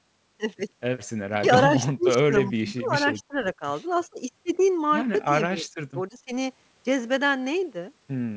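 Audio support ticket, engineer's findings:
Speech suppressed in double talk at 1.30–1.46, 1.78–2.95, 3.20–3.37, 5.47–6.32 s: voice ducks and chops, worst about 30 dB down. Likely AEC squashing near-end during overlap.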